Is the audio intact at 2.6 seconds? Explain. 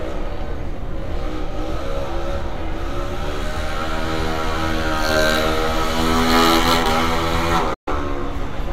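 Yes, the audio at 2.6 seconds is intact, with no dropout, click, distortion or other fault at that moment.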